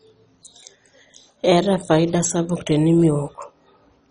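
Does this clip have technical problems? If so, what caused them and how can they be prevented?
Yes. Across the whole speech clip there is heavy MP2 compression damage, with nothing above about 10.4 kHz. The sound is dull and gurgling, with a granular roughness. This is likely from MPEG Layer II coding at a starved rate, which fits roughly 32 kbps. Too few bits reach the sub-bands, so the upper ones switch off and the rest are coarsely quantised. On a spectrogram, a hard ceiling near 10.4 kHz sits over flickering, blocky patches below it. Preventing this means encoding at a higher bitrate or with a more efficient codec.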